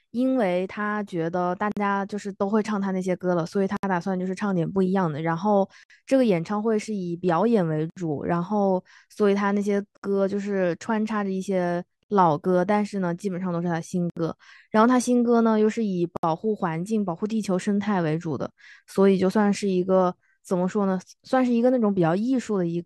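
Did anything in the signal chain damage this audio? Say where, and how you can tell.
Yes, at the codec stage, where separately encoded pieces were spliced back together. Short silent holes, each a gap at a join of encoded pieces, cut into continuous speech at 1.72 s (51 ms), then at 3.77, 5.83, 7.90, 9.97, 12.03, 14.10 and 16.17 s (about 67 ms each), roughly every 2 s. Their edges are smeared by the codec, and the speech resumes exactly where it stopped. Each encoder run's startup delay and end-frame padding stayed in the joined file.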